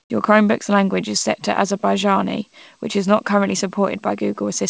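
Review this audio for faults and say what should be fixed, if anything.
From 0.00 to 0.10 s the background is a flat, featureless hiss about 11 dB quieter, likely comfort noise in place of the background. The sender went silent during that pause and the receiver filled it with synthetic noise.

To prevent it, turn off discontinuous transmission on the sending side, or keep it from engaging at the start of the stream, so the real background is sent throughout.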